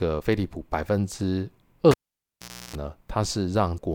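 At 1.91 s the speech cuts out with a pop, and what you've got is a cable pulled and plugged in while live. For about 0.8 s the line is disconnected, so it drops to near silence. Within that gap, as the plug goes back in and only the tip is touching, there's roughly 0.32 s of 60 Hz mains buzz from the ungrounded contact, and a second pop at 2.76 s as the connection seats and the sound comes back.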